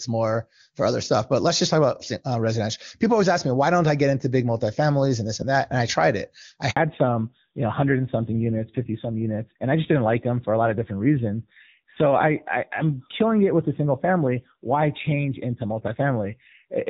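A handover gap opens at 6.71 s and lasts until 6.77 s, about 60 ms. As the call switched networks, no speech frames got through, so the voice dies away within a few tens of milliseconds and the audio from that short stretch is lost rather than muffled or smeared.

Fallback to narrowband follows at 6.77 s and holds to the end. The clear, airy HD Voice character of the opening, which points to AMR-WB at 23.85 kbit/s, gives way to a duller, rougher sound with nothing above 4 kHz, which fits a narrowband AMR codec at 7.4 kbit/s.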